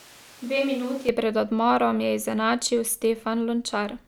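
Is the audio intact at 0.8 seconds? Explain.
No. At 0.8 s the sound is roomy and hollow, thin in the bass and about 5 dB quieter, with more background noise. This is a switch to a distant microphone, likely from the close one dropping out. It runs from the start until 1.09 s, then returns abruptly.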